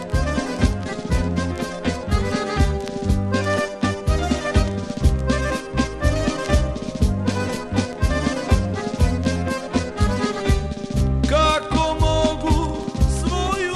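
No technical faults can be heard anywhere in the audio.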